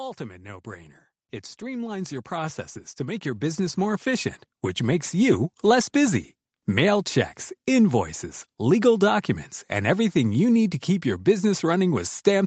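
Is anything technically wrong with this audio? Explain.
Yes. From 1.59 s to 5.48 s the speech shows automatic gain rising. The gain control judged the input too quiet and lifted its gain by about 14 dB over roughly four seconds, so the voice and the background noise swell together until the level settles just before "less busy". On a waveform the envelope widens steadily across that span, and on a spectrogram the noise floor brightens along with the speech. The call path's bandwidth stops at 8 kHz.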